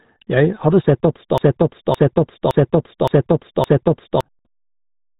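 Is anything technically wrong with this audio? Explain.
Yes, there are two faults. Throughout the clip the speech carries the sound of the RealAudio 14.4 codec. Nothing above about 3.8 kHz survives, so the voice is dull and boxed-in. The heavy coding damage adds a gargly, smeared texture to vowels and consonants. This degree of band-limiting and artefacting fits an 8 kbit/s speech codec built for dial-up modem links. Such a codec throws away high frequencies and rebuilds the signal from a coarse model of the voice.

From 1.38 s to 4.21 s, right after "hadde sett at", a broken-record loop takes over. A 565 ms fragment repeats exactly, back to back, five times in a row, and the speech that belonged in that stretch never arrives. The likely cause is a stall in the player, encoder or stream, which kept re-sending the last buffered fragment it held until fresh data resumed.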